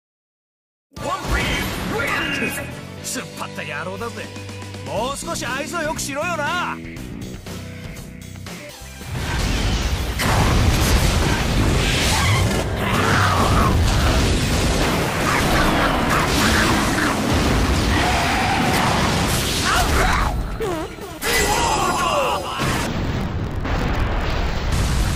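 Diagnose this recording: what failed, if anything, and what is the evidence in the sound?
Interleaved audio read as planar, from 22.86 to 24.74 s, at the sample-format conversion stage. The sound drops an octave and turns doubled and choppy. A 43.1 Hz flutter fits 23.22 ms blocks, likely 1024 samples. Alternating left-right samples were split into halves, each playing at half speed.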